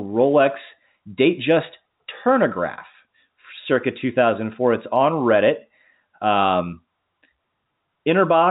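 No technical faults can be heard in this recording.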